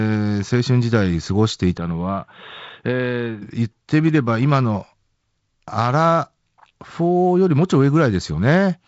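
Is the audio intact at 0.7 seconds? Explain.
Yes, at 0.7 seconds the audio is intact, with no dropout, click or other fault at that moment.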